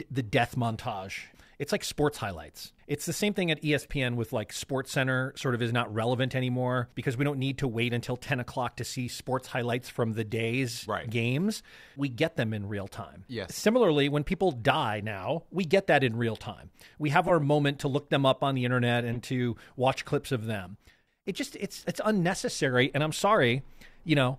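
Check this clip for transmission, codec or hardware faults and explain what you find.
The speech has four short decoding faults. Corrupt frame decoding occurs at 3.79 to 3.86 s, 17.26 to 17.31 s, 19.14 to 19.17 s and 21.79 to 21.85 s. Flipped bits in a few compressed frames were decoded anyway, misplacing spectral energy and producing brief chirps or noise bursts. The loudest, near 17.3 s, peaks around -10 dBFS. The others sit near -25 to -35 dBFS.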